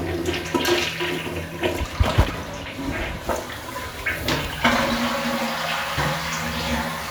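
Nothing in this recording of sounds stood out as a technical problem on listening.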